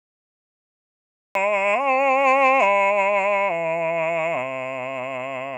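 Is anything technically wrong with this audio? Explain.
Yes. Cut-off start, at 1.35 s: the capture began late, so the first 1.35 s is digital silence and the music enters already in progress, mid-sound, with no natural attack or fade-in, as if a switch were thrown rather than the music beginning.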